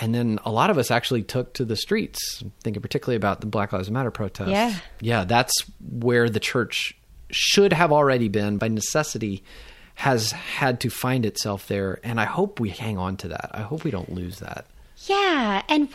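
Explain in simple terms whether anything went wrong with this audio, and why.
The recording system likely failed to collect tiny pieces of sound in time, a dropped buffer (overrun), so the audio skips ahead at 9.99 s after "already been by necessity" and at 14.46 s after "hope we don't lose".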